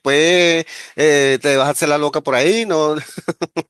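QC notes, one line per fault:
No faults heard anywhere in the speech.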